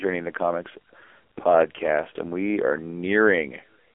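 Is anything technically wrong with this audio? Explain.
Yes. Throughout, the speech carries heavy AMR narrowband mobile codec damage. Low-bitrate vocal-tract modelling, consistent with roughly 6 kbps AMR-NB, makes it buzzy and synthetic, and a spectrogram shows a 300 Hz to 3.4 kHz band with nothing above 3.5 kHz.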